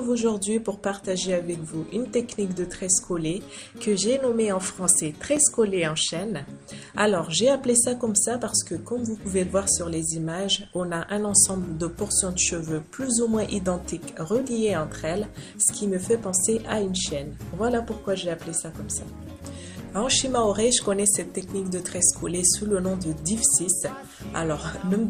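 Underrun with held sample at 5.36 s and 21.41 s: the output buffer ran dry, and the converter froze on its last value, flattening the waveform for about 4.4 ms and 1.5 ms, the second fitting a 64-sample gap. About 4 ms and 1.5 ms of live audio were lost in the two gaps.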